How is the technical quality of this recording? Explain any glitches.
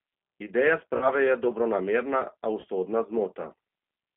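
The recording is narrowband telephone-grade speech with plainly audible codec damage throughout, plus two short dropouts that the decoder papered over.

G.729 codec: The whole clip passes through this 8 kbit/s low-rate speech coder, G.729A variant. The bandwidth sits between 150 Hz and 3.6 kHz, so there is no low bass and no air above it. The coder rebuilds each 10 ms frame from a vocal-tract filter, a pitch predictor and a few pulses rather than the actual waveform, which leaves the speech noticeably rough and synthetic.

VoIP packet loss concealed by the speech codec: It occurs at 0.97 to 1.09 s, just before "je dobronamerna", and again at 2.60 to 2.70 s. The first gap covers about 40 ms, which fits four lost 10 ms frames. In the second, about 70 ms went missing in scattered pieces over an 80 ms span, with the longest unbroken gap 40 ms. In each case the decoder kept extending its last pitch and filter while lowering the gain, so the speech smears into a brief fading buzzy tone or coloured noise. 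Because every frame builds on the one before, the speech stays weak and distorted for a short while after the real audio resumes.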